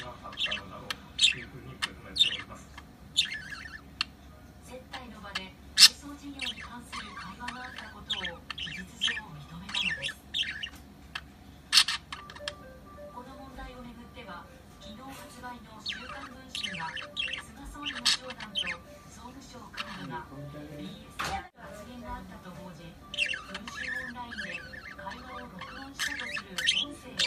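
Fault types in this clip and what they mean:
No technical faults can be heard anywhere in the signal.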